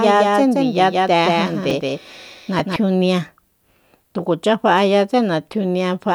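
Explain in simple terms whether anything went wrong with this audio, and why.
A doubled audio track is present, most likely because the same speech was picked up a second time through a slower route. A quieter copy trails about 150 ms behind from the very start, giving an echo-like smear, then cuts off abruptly at 2.76 s.

There are also two spots where chunks play out of order: a tiny 5.33 ms slice of audio was delivered one slot late and played after the piece meant to follow it. At 1.70 s and 2.59 s this causes a brief jumbled moment.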